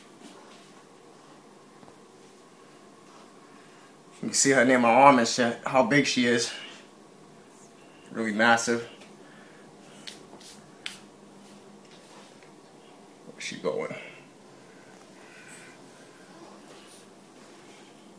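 Wrong sample rate from 13.52 to 16.38 s: the sound slows to about 0.92 times normal speed and drops about 1.5 semitones in pitch, which fits material recorded at 24 kHz being played back at 22 kHz without conversion, so tempo and pitch sag together.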